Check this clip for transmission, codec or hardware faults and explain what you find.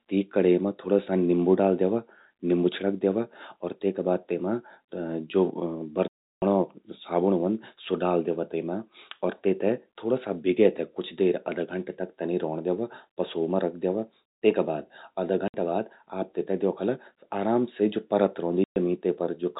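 The speech has three dropouts from packet loss filled with silence, at 6.08 to 6.42 s, 15.48 to 15.54 s and 18.64 to 18.76 s, lasting 340, 60 and 120 ms. All three are multiples of 20 ms, which fits lost 20 ms packets. The receiver substituted silence, so the speech stops dead at each hole's hard edges. The G.711 telephone coding limits the band to below 4 kHz.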